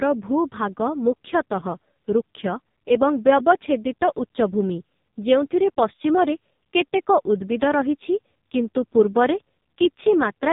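Speech passed throughout through the AMR narrowband mobile codec, with nothing above 3.8 kHz. Coding damage is heavy: a buzzy, synthetic voice from the vocal-tract model and sparse pulse excitation, which points to AMR-NB at a low rate, around 5.15 kbps.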